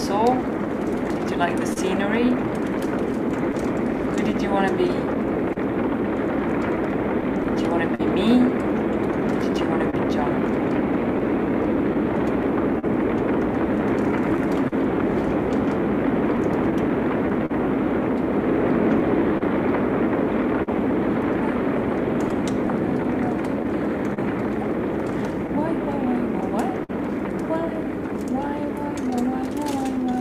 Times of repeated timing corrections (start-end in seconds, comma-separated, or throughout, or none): 11.32-30.05